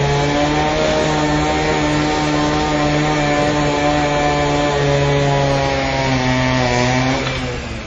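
Throughout, the sound is dull with nothing above 8.6 kHz and layered, mismatched coding artefacts, likely transcoding between lossy codecs, consistent with low-bitrate WMA re-encoded to AAC-LC.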